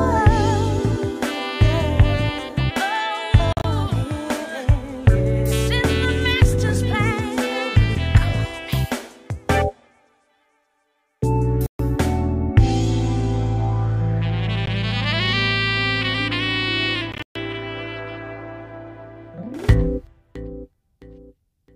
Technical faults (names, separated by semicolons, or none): Bluetooth dropout; loud pop